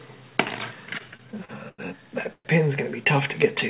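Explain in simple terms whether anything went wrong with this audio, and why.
Between 0.98 and 1.80 s the sound shows repeated stalls (stutter). Audio data reached the receiving end late or more slowly than it was being played, so the playback buffer ran dry seven times in that stretch. Each time, the receiver held the last bit of sound going to cover the wait, the longest wait being about 0.1 s. About a quarter of that stretch is filler, so the sound drags and stutters, though nothing is actually lost.

From 2.33 to 2.47 s there is a call audio freeze. The sound stops moving forward for about 0.12 s: the last sound is stretched out briefly, then about 70 ms of silence follows before playback resumes exactly where it paused. The likely cause is data held up in transit, which emptied the playback buffer. The result is a short inserted gap rather than missing sound, and everything after it is pushed about 0.12 s later. 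Throughout the clip, the call connection's normal behavior cuts off everything above 4 kHz.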